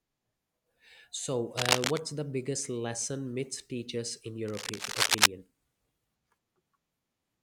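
A burst of dense, uneven scratching sits over the speech from 1.57 to 1.99 s, just before "the biggest lesson myths", and returns from 4.48 to 5.27 s, right after "myths teach us in". Both bursts are somewhat louder than the speech itself. This is cable scratch noise, likely from a worn cable, connector or control being moved so its contact resistance jumped about rapidly and added ragged bursts of noise.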